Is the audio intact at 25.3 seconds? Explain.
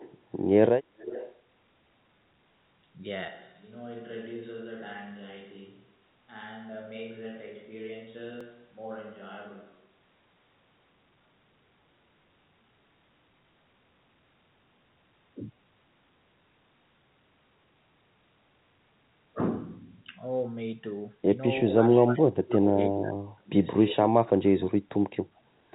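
No. From 25.25 to 25.51 s the speech drops by roughly 30 dB, likely speech suppressed in double talk by the echo canceller. The waveform shrinks and the spectrogram darkens there.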